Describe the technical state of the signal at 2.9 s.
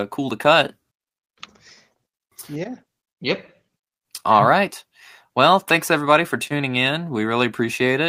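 At 2.9 s the speech signal is intact, with no audible fault at that moment.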